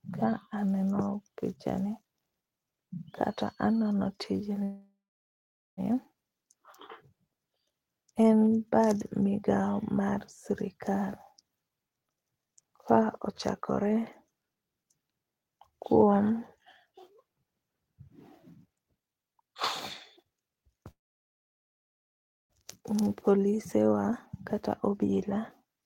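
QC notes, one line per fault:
4.63–5.80 s and 20.91–22.53 s, call audio freeze: The speech stops and the last sound is held briefly before it fades out. The first gap lasts 1.14 s, with about 0.8 s of it silent. The second lasts 1.59 s and is almost entirely silent. Speech then resumes exactly where it broke off, with nothing lost. The likely cause is held-up packets draining the jitter buffer, so the receiver stretched the last sound and then waited.
11.35–15.72 s, 18.65–19.52 s, 20.19–20.85 s and 24.53–25.83 s, jitter buffer speed-up: The speech runs faster while its pitch stays the same, so it sounds rushed. The first stretch plays at 110% speed and loses roughly half a second. The second is the most hurried, at 143%, trimming around 0.4 s. The third runs at 128%, and the last at 108%. The receiver is cutting tiny pitch-period slices to drain excess buffered delay.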